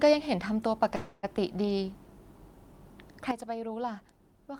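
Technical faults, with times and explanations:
0.95–1.25 s, call audio freeze: the sound stalls and smears into a fading buzz for about 280 ms, likely a jitter buffer running dry, then resumes with nothing lost.
3.31 s to the end, sudden gain jump: speech and background noise drop together by about 10 dB in one step, likely a gain change applied with no ramp.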